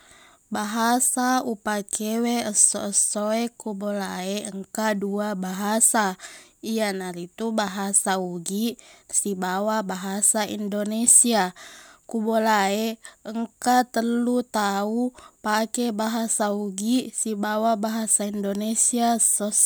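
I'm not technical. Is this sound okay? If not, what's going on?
Yes, this sounds fine.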